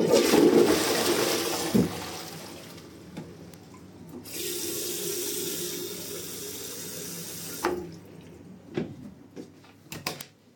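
Bit error spikes at 3.54, 6.06 and 10.21 s: single flipped-bit samples jumping to about -18, -18 and -6 dBFS, each a sharp broadband tick.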